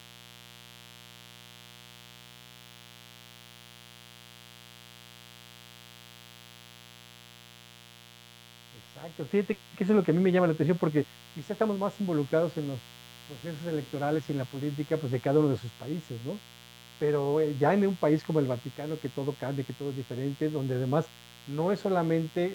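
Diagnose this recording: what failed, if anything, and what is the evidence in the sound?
The analogue wiring stage has failed: a mains buzz runs under the speech for the whole clip, a steady raspy tone built on 60 Hz, sitting roughly 25 dB below the signal. Switching spikes entering through poor shielding or a nearby dimmer repeat twice per cycle, spraying harmonics into the kilohertz range.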